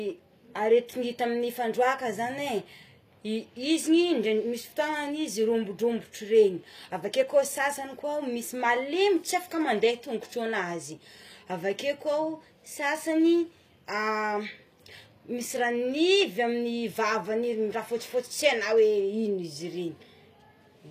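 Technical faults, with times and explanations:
Throughout, HE-AAC compression: the speech has a plainly audible coded quality, with s sounds turning gritty and metallic while the treble keeps a bright but synthetic sheen. This is likely spectral band replication: the upper band is rebuilt from copied lower bands under a coarse envelope, which fits a low bitrate around 24 kbps. A spectrogram shows repeated, blocky high-band patterns and a hard ceiling with nothing above 14.9 kHz.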